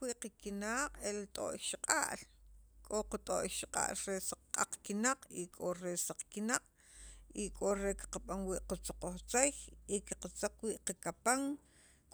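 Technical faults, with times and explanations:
Nothing to flag here: the speech comes across without any technical faults worth pointing out.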